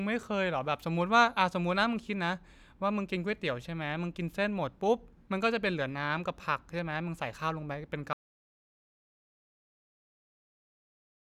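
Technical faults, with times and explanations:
8.13 s to the end, audio dropout to silence: the speech cuts off in mid-flow and never returns, leaving silence with no room tone, hiss or decay. A quiet pause or a noise gate would keep some faint background or fade the tail away. Here the signal stops at once and stays silent, which points to the input being lost, likely through a disconnected device, failed link or stray mute, while the recorder kept writing silence.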